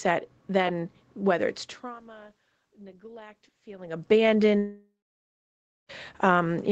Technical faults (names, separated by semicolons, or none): automatic gain rising; long network dropout